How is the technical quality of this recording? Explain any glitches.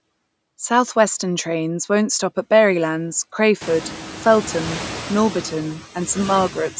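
There's one real glitch here, and it runs through the whole clip: noise suppressor artifacts on speech that has already been through call microphone processing, which is why nothing reaches above 8 kHz.

The suppressor judges each frequency band, frame by frame, on whether it looks like steady noise, and pulls those bands down by about 8 dB. You hear it most once the room noise jumps by about 22 dB at around three and a half seconds. After that the background sits only about 16 dB below the speech, so the suppressor is working hard. The leftover noise ducks in the pauses and swells back under the talking.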